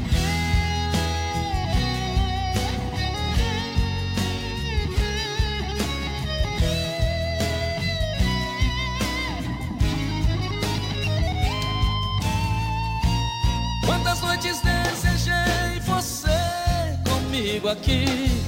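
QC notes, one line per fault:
Throughout: imaging from linear upsampling. The top end sounds dulled, and a faint metallic shimmer sits above roughly 11 kHz, around 30 dB down. That fits a 22 kHz source raised to 44.1 kHz by straight-line interpolation, which leaves mirrored spectrum copies only weakly filtered.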